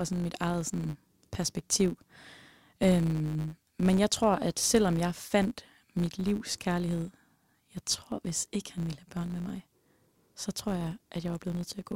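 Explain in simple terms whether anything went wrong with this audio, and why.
A faint buzz runs under the speech from start to finish. It is a filter restarted on every block, ticking 100 times a second and following the speech's loudness.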